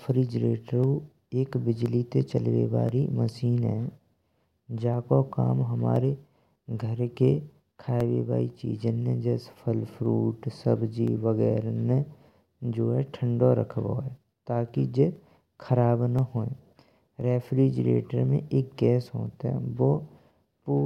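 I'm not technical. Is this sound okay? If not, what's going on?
No. Starting at 0.84 s and continuing to 20.28 s, there's a regular tick roughly once every second (every 1.02 s), around twenty in all, heard only while someone is talking. These are periodic USB or driver dropouts: something on the computer briefly interrupts the audio connection on a steady timer, and each time a tiny sliver of sound, about half a millisecond, is skipped, leaving a small jump that clicks.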